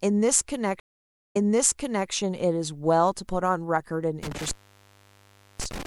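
At 0.80 s a stream reconnect begins. The network connection dropped, so the player stopped receiving data, re-established the link and started a new decoder partway through the stream. The speech falls silent for 550 ms, and when it returns it has jumped back about 0.76 s, so a stretch already heard plays a second time. The restart is soft because the fresh decoder mutes or fades in its first frame or two. The disturbance runs to 2.11 s.

From 4.23 s to the end of the clip an intermittent contact fault takes over. A loose plug or cable connection opened, breaking the signal path for about 1.09 s. The speech cuts out abruptly, with crackle at the edges where the contact makes and breaks. While the line is open only a faint hiss remains in place of the speech.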